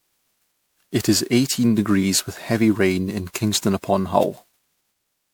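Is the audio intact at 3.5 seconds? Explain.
No. At 3.5 seconds, as throughout the speech, the likely cause is generation loss: the audio seems to have been decoded and re-encoded as MP3 around fifteen times, at a rate that fits 128 kbit/s, and each pass requantised it on a shifted frame grid. The errors stack up, so the sound is swirly and hollow, with smeared, blurred attacks and noise that a single encode would not leave. Nothing remains above 20.8 kHz.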